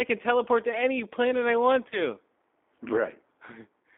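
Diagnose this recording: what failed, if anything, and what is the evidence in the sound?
The speech sounds rough and faintly synthetic throughout, confined to a narrow line band of roughly 250 Hz to 3.6 kHz with nothing bright on top. This is the codec stage: the damage is plainly audible and has the rough, synthetic texture of a G.729 codec, which fits G.729A at 8 kbit/s. Each 10 ms frame is rebuilt from a vocal tract filter, a pitch predictor and a handful of pulses rather than from the actual waveform.

From 1.90 to 2.09 s the voice briefly smears into a stretched sound that weakens, then stays thin and distorted before it recovers. This is VoIP packet loss concealed by the speech codec. A network-stage gap of about 20 ms, which fits two lost 10 ms frames, was filled by the decoder repeating its last pitch and filter at falling gain. Because each frame depends on the one before, the distortion lingers well beyond the missing audio.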